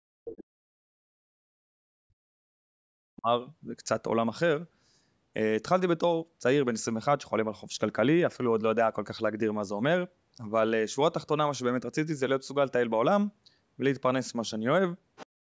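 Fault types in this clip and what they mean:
Speech suppressed in double talk: from 0.0 to 3.27 s and again from 15.36 s to the end, the voice sinks by roughly 40 dB, likely where an echo canceller mistook overlapping talk for echo. The waveform collapses there and the spectrogram goes near-empty.
Other side's voice leaking through: a faint second voice appears from 15.16 to 15.26 s, roughly 20 dB below the speech, likely loudspeaker echo the canceller missed. It shows as a weak extra band pattern on the spectrogram.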